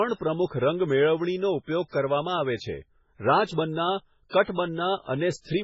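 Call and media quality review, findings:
Whole clip: watery, swirly speech, nothing above 7.7 kHz, smeared onsets, heavy damage. Likely MP3 compression at a very low bitrate, around 16 kbps. The encoder drops the top band and zeroes weak frequency lines, which flicker between frames.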